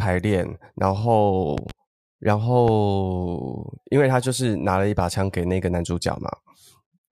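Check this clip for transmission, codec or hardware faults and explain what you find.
Three loud pops interrupt the speech: a double pop from 1.58 to 1.73 s and a single one from 2.68 to 2.72 s, each roughly 10 dB above the speech, likely from voltage pulses such as static or a switching glitch. On the waveform they show as tall spikes, and on the spectrogram as thin vertical broadband stripes.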